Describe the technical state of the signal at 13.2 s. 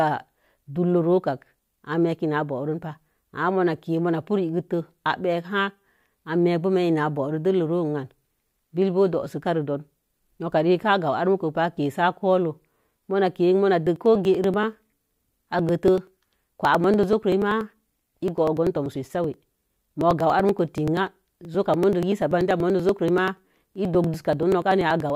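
At 13.2 s the signal is intact, with no audible fault at that point in the speech.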